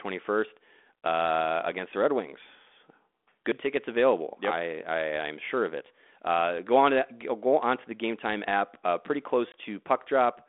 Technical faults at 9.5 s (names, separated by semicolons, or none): packet loss on an ADPCM call